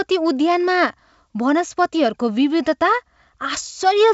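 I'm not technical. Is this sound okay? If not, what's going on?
Yes, nothing here is faulty: it's speech carried over G.722 wideband telephone coding, so the sound tops out around 7.7 kHz, which is normal for that kind of phone line.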